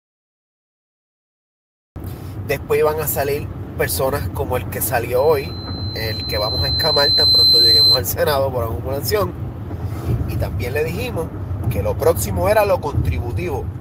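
The recording began late: nothing was captured for the first 1.96 s, so the file holds only digital silence until then, and the audio cuts in at 1.96 s in the middle of a sound. This is a cut-off start. There is no natural onset or fade-in, just an abrupt jump from nothing to full level that makes the opening feel clipped off.

From 5.16 s to 8.03 s, a microphone was picking up the loudspeaker it fed, and at one frequency the loop gain rose above one, producing a loudspeaker feedback squeal. A single tone at 4.1 kHz swells over roughly two seconds into a piercing whistle that sits about 10 dB above the rest of the audio before it stops at 8.03 s.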